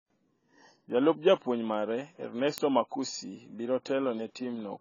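AAC compression at a low bitrate is the likely cause of the damage throughout this speech: nothing survives above 7 kHz, so the sound is dull and smeared, with a fizzy, warbling texture on sibilants, which fits heavy quantisation at around 16 kbps.

Word clock ticks run from 0.90 s to 4.26 s, about five sharp clicks roughly once per second. The receiving device is free-running against a sender's clock that is off by a few tens of ppm, so a single sample slips at each crossing.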